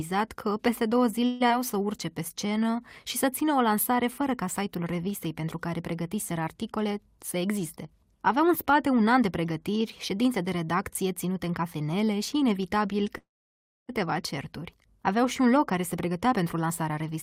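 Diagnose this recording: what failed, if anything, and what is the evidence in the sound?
Call audio freeze at 1.25–1.42 s, right after "că peste două", and again at 13.18–13.91 s. This is a network and jitter-buffer fault, likely packets held up in transit that emptied the buffer. The receiver stretched the last sound into a fading fill for 150 ms, then 708 ms, the second trailing into about 640 ms of silence. Speech resumes where it stopped, with nothing lost.

Skip ahead at 1.48–1.52 s. Right after the first freeze, roughly a tenth of a second of speech vanishes. The two sides are joined by a 12 ms bridge. A stretch of audio was dropped, either in transit or by an overflowing jitter buffer, while later audio was already queued, cutting the delay.

Jitter buffer slow-down from 1.74 to 2.82 s. Speech runs at 92% of normal speed with unchanged pitch, and sounds are drawn out. The receiver repeated single pitch periods again and again, adding 94 ms to rebuild its reserve.

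Jitter buffer speed-up from 6.84 to 9.09 s, between "revistei pentru care pregătiseră" and "an de pregătiri ședințe", at 107% speed. It happens again from 15.97 to 17.17 s after "un loc care se", at 109% speed. Pitch holds while the speech sounds hurried. The buffer was trimming short pitch-period slices, about 150 ms in the first stretch and 100 ms in the second, to cut excess delay.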